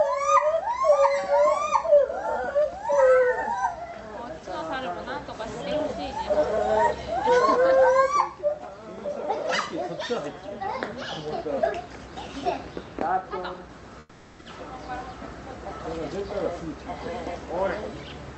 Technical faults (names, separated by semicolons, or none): comfort noise in place of the background